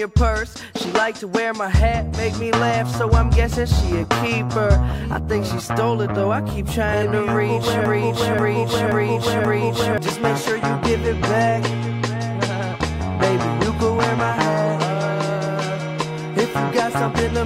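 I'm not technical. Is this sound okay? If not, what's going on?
No. From 7.86 to 9.98 s, a broken-record loop repeats one 0.53 s snippet four times, likely from a stalled stream, and the intended audio there is lost.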